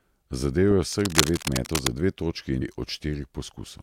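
Cable scratch noise runs from 0.92 to 1.87 s in this speech recording: a dense, ragged rustling sits over the talker for nearly a second, roughly as loud as the speech itself. The likely cause is a worn cable, connector or control being moved, so its contact resistance jumps around rapidly and the fluctuating contact injects irregular bursts of noise into the signal path. Damaged data in a compressed stream then appears at 2.60 s as a brief chirp or blip. Part of the encoded stream is corrupted there, so the decoder misreads those frames and loses sync before locking onto the next valid frame header.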